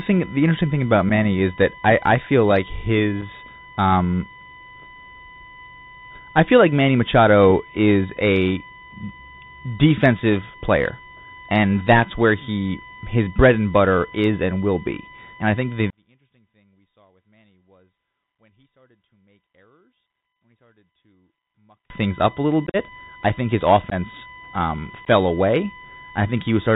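Speech runs throughout under a steady USB whine with a fundamental at 1 kHz but strongest at its 4 kHz multiple, about 20 dB below the speech. Its fixed pitch and exact harmonic spacing mark it as interference from the 1 ms USB frame rate leaking through power or ground, not mains hum. The whole clip also carries the plainly audible Bluetooth CVSD headset codec. Its 64 kHz one-bit delta stream cuts everything above 4 kHz, leaves sibilants scratchy and lays a granular hiss under the voice. That grain, which follows the signal, sets it apart from a simple low-pass filter or a steady noise floor. Unconcealed Bluetooth headset packet loss punches abrupt holes into the speech. About 7.5 ms goes at 1.1 s and another 7.5 ms at 3.21 s, just after "I I feel like". At 22.67–22.76 s, after "things up a little" and before "I think his", 60 ms is lost in scattered gaps over 75 ms, with the longest run 45 ms, giving a chopped, crackly stretch. 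A further 15 ms goes at 23.90–23.94 s and 15 ms at 25.05–25.08 s. The edges are hard and the speech returns quieter rather than being smoothed over, which separates this from concealed dropouts. From 15.90 to 21.90 s, between "I think the" and "things up a little", the sound falls by about 38 dB to a faint residue, background included. The likely cause is one stereo channel inverted in polarity, so everything common to both channels cancels on mono summing.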